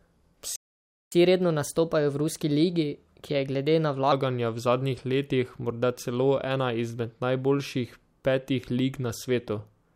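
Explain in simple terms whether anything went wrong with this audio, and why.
Two things go wrong near the start. The first is a playback stall: from 0.56 to 1.12 s the speech simply stops for just over half a second, likely because the player ran short of data.

Right after that comes catch-up at higher speed: from 1.12 to 4.12 s the speech plays 1.15 times faster and about two semitones higher, winning back some of the lost time. Unlike a wrong playback rate, it returns to normal after three seconds.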